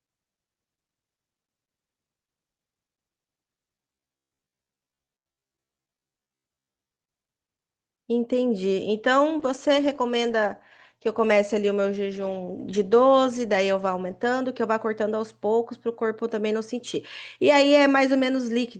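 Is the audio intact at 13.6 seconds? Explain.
No. At 13.6 seconds the speech sounds rough and watery, with the top end dulled. It sits inside a call bitrate drop running from 9.4 to 14.61 s. The call's bandwidth estimate fell, so the encoder was pushed from 64 kbps down to 19 kbps and held near that floor for about 4.9 s. At that rate it codes far more coarsely and cuts the audio band from 20 kHz to 12 kHz.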